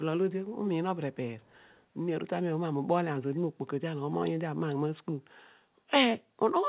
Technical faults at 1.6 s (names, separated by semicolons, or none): echo leak